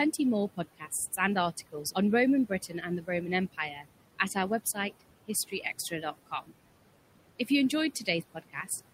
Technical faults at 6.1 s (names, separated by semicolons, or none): noise suppressor artifacts; speech cut by the noise suppressor